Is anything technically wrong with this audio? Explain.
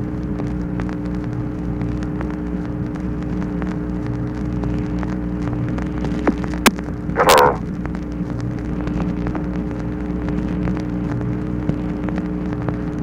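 Yes, there is integer overflow at 6.66 s and again from 7.29 to 7.39 s. On these loud peaks the summed level ran past the largest value the integer format can hold, by about 7 dB and then about 2 dB. Instead of being held at the ceiling, the samples wrapped round to the opposite extreme. The result is a violent crack. Clipping would flatten the peaks into a duller buzz, but here the waveform jumps across the full range, which is why it sounds far sharper.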